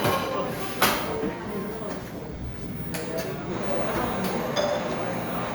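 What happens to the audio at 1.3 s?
At 1.27 to 1.29 s a skip ahead occurs: roughly 0.7 s of audio was dropped, so playback jumps forward with no gap and the two sides are spliced almost directly. From 1.39 to 3.45 s a jitter buffer speed-up trims short pitch-period pieces, about 150 ms in total, so the sound runs 6% fast at unchanged pitch.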